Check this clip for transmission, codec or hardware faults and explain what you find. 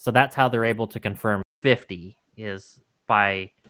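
Two faults turn up in this speech clip: packet loss patched by error correction, twice, and a likely change of input device partway through.

Lost packet rebuilt from error correction, 0.59 to 0.73 s (just after "that's how") and again 1.73 to 1.79 s. Packets went missing, but each following packet carried a low-bitrate backup copy, which the decoder played in their place. About 80 ms is rebuilt in the first stretch and 40 ms in the second, which fits runs of four and two 20 ms packets. There is no dropout, but those moments sound coarser and grainier than the surrounding speech.

Input switched to a poorer device, from 1.43 s to the end, likely caused by the system moving to another microphone or a headset call profile. A short silence of about 200 ms marks the switch. Afterwards nothing is present above 8 kHz, so the speech turns duller and narrower. A faint new background noise appears, far below the speech at around 55 dB down, while the overall level stays about the same.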